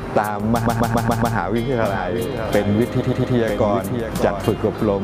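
From 0.65 to 1.35 s there are repeated frames. A 139.3 ms block of compressed audio, which fits a run of six frames, plays five extra times. The result is a rhythmic stutter. The repeats add 0.70 s to the running time.

A doubled audio track runs from 1.83 to 4.51 s. A second, full-band copy of the sound trails the original by roughly 0.7 s at about 5 dB lower. It has no reverberant tail or room colouring, and it cuts in and out abruptly at both ends. The likely cause is the same signal reaching the mix twice, once through a slower capture path.

Inside that stretch, from 3.00 to 3.35 s, repeated frames return. A 116.1 ms block, consistent with five frames, plays three extra times, adding 0.35 s of stutter.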